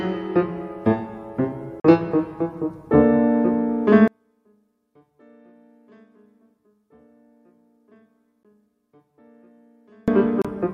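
At 1.8 to 1.84 s the sound drops out for about 44 ms, then comes back further along as if it had kept playing. That's likely a Bluetooth dropout: a short run of audio packets, roughly three going by the gap length, missed their slot and got discarded. Shorter holes of the same kind turn up at 8.43 s and from 10.42 to 10.45 s.

From 4.08 to 10.08 s the level sinks by about 38 dB, and what survives is a faint copy. That points to one channel inverted, likely, so the material common to both channels cancels when they're summed to mono.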